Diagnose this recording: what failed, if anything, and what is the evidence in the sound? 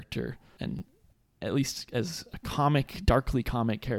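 A repeated buffer at the driver/buffer stage: new samples arrived late, so the last 11 ms block replayed, which fits a 512-sample buffer. At 0.79–0.81 s one slice of speech plays three times, and at 2.33 s one doubles. Each join is hard, giving a brief buzzy stutter.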